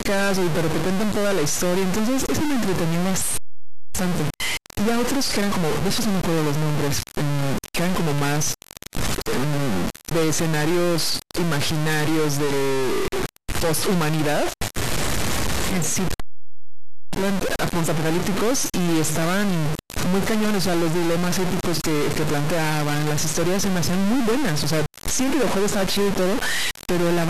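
From start to finish the speech carries a harsh, buzzy distortion, and the pauses never fall silent but sit under a steady hiss. This points to a stuck bit, likely a data line or converter bit held fixed, forcing roughly half the samples off by a step of around -20 dBFS. On a waveform the gaps show a fuzzy band of that height instead of a flat line. A spectrogram shows broadband noise smeared across every frequency, including the pauses.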